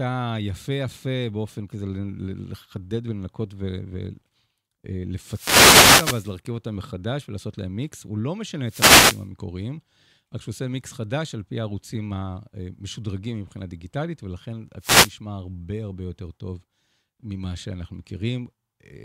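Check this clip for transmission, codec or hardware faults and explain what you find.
The clip shows a wireless microphone noise hit, three times: 5.24 to 6.34 s, 8.63 to 9.27 s and 14.79 to 15.13 s. The FM radio link fades as reflected signals cancel, so receiver noise swells into a brief swish of static over the speech. Unlike a digital dropout, the sound is buried under hiss rather than cut to silence.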